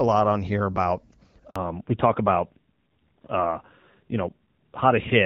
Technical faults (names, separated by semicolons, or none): handover gap; fallback to narrowband